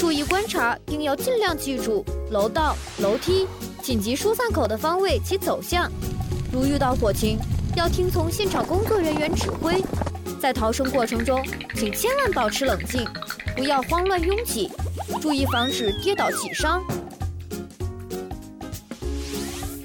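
Right at the start, at 0.31 s, there's a sharp snap laid over the audio, and then a second, quieter one at 4.65 s. Both are electrical switching spikes, each very short. The first peaks around -5 dBFS, while the later one sits near -15 dBFS. The likely cause is a nearby switch, motor or static discharge arcing briefly, with the audio line picking up the burst.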